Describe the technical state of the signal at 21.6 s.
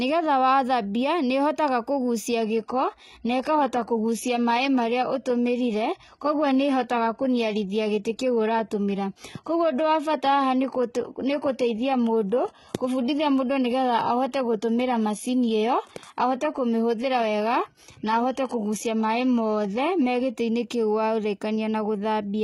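At 21.6 s the speech signal is intact, with no audible fault at that moment.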